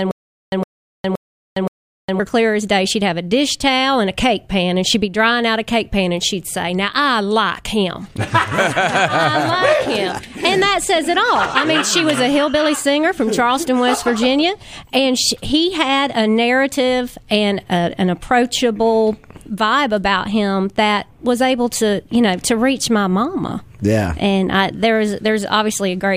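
From the very start until 2.20 s there is a stutter with silent gaps, already under way when the clip opens. The same 0.11 s burst of sound plays four times, each followed by about 0.41 s of dead silence, so it returns every 0.52 s. This likely comes from a stalled player or stream replaying its last fragment at each retry. On a waveform, identical short blocks sit between flat silent gaps; a spectrogram shows repeated matching slices separated by empty black columns.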